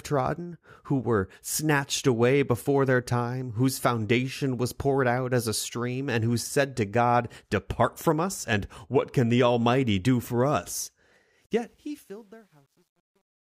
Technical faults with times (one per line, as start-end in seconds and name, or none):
11.43-13.46 truncation distortion on a fade